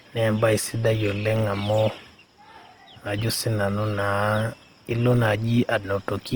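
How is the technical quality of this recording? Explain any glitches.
The recording has plainly audible Opus compression damage from start to finish. Throughout the clip the speech sounds grainy and rough, with a noisy sheen over tonal parts, though the bandwidth stays full, reaching about 20.2 kHz. The likely cause is Opus encoding in its music (CELT) mode at a low rate, consistent with 24 kbps. When bits run short, it refills bands with folded or noise content instead of leaving gaps. That gives roughness rather than MP3-style swirling.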